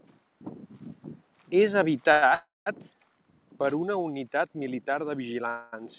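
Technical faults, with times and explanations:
2.12–2.25 s, short stall from a late packet: one sound is held about 100 ms too long, then continues from the same place with nothing lost. A packet missed its slot and the receiver stretched the last sound. On a spectrogram, the harmonics smear into flat horizontal bands. The waveform repeats one period.
2.34–2.69 s and 5.49–5.82 s (just after "militar de"), call audio freeze: the sound stops and is filled, 322 ms and then 238 ms, before resuming where it stopped. The likely cause is packets held up in transit, emptying the jitter buffer. In the first freeze, a fading fill decays into about 190 ms of silence. That shows as a dark vertical gap below the 4 kHz ceiling of the call codec and a flat waveform. The second freeze is a fading fill with no silence and shows as stretched bands.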